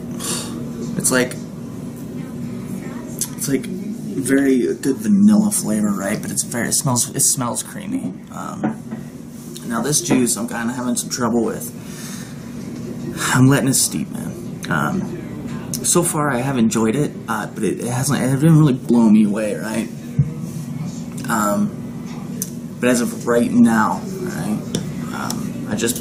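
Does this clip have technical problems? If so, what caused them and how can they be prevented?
Yes: damaged data in a compressed stream causes short blips at 2.29–2.33 s, 8.91 s and 18.89 s. Corrupted bytes make the decoder misread frames and lose sync. A spectrogram shows each as a thin broadband vertical smear; the waveform shows an abrupt discontinuity. Prevent this with checksummed, error-checked transfer and storage.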